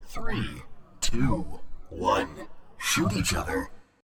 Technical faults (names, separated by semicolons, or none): loud pop